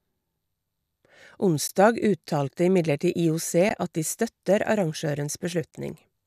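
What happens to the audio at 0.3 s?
Nothing goes wrong at 0.3 s: the speech plays through that moment intact, with no dropout, click or distortion.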